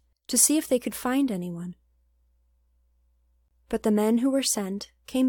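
Separately encoded pieces were joined without trimming their padding, leaving a gap at a join of encoded pieces from 3.48 to 3.51 s: a 25 ms silence cutting the speech.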